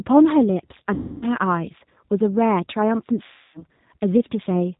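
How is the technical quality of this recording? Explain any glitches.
Quality is limited: the speech has gone through a low-bitrate voice codec the whole way, and there are two dropout-style glitches.

Throughout, you're hearing the G.729 codec, and the damage is plainly audible. The sound points to an 8 kbit/s narrowband link. The codec rebuilds speech from a vocal-tract filter, a pitch predictor and a few pulses per frame, and nothing above 4 kHz makes it through. The voice is dull, slightly rough and a bit synthetic.

The two glitches are VoIP packet loss concealed by the speech codec, at 0.94 to 1.25 s and again at 3.26 to 3.63 s. Each gap is about 280 ms of lost audio, which fits a run of around 14 packets. The decoder fills each gap by repeating its last pitch and filter settings while turning the gain down. The speech smears into a buzzy tone or coloured noise that fades, and stays weak for a moment after the packets return.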